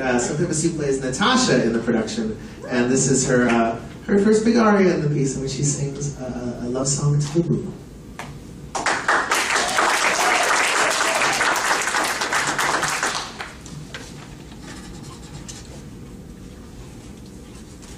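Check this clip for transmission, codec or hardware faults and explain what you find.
Two brief dropouts of the same kind stand out.

Compressed frames skipped, at 6.82 s and 13.02 s: whole frames of the encoded stream never reach the output, either missing or rejected as corrupt by the decoder, so playback leaps forward. Roughly 50 ms of audio vanishes at the first point and around 20 ms at the second. Each join sounds like a small jump in continuity as the audio skips ahead.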